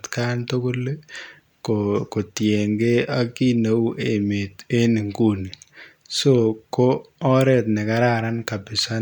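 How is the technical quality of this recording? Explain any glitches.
No glitches or technical faults.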